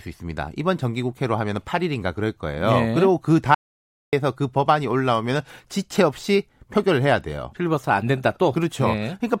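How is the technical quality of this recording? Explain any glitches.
The recording has one clear glitch, an audio dropout to silence from 3.55 to 4.13 s. For about 0.58 s the speech cuts off mid-flow and the signal falls to silence, with no room tone or background hiss underneath, before returning just as abruptly. The cause is likely a brief loss of the input, such as a momentary disconnection or an accidental mute, while the recorder kept writing silence. Whatever was spoken in that gap is lost.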